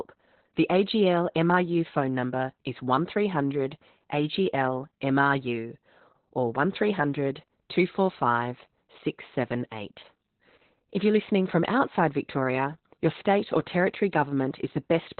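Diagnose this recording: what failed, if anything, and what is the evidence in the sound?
The codec stage failed: Opus voice compression, running in its SILK speech mode at narrowband. Throughout the speech, nothing is present above about 4.3 kHz, and the voice is muffled, hoarse and slightly robotic. This coarse excitation coding points to a very low bitrate, around 8 kbps.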